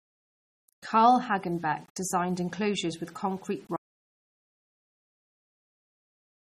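Speech recording with three faults. The first, low bit depth without dither, runs throughout: quiet passages and word tails turn gritty, with a grainy distortion that rises and falls with the voice and sits around 35 dB below the signal. The likely cause is rounding to a coarse word length with no dither, which fits an 8-bit signal, so the error tracks the waveform instead of forming a steady hiss. The second, MP3 compression, is also present throughout and plainly audible. Nothing remains above 15.2 kHz, and the sound has a watery, swirling quality, with metallic chirps on sibilants and smeared consonant attacks. This points to a low-bitrate encode around 32 kbps, which is likely the cause: the encoder was short of bits, so it discarded weak spectral lines that then flicker on and off between frames. The third, an audio dropout to silence, starts at 3.77 s, right after "designed enclosures with concrete", and lasts to the end of the clip. 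The sound stops mid-flow and is replaced by silence, with no room tone or noise floor underneath. Whatever followed is lost. The likely cause is the input being lost, through a disconnect, link failure or mute, while the recorder kept writing silence.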